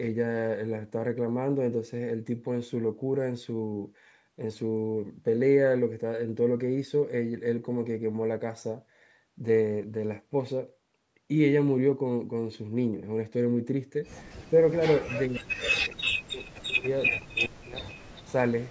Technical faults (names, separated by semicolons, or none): echo leak; speech suppressed in double talk